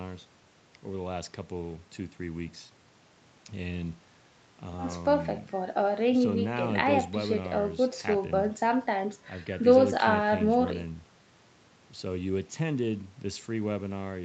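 Nothing in this speech stood out on listening, apart from the top end stopping near 8 kHz as the call path would leave it.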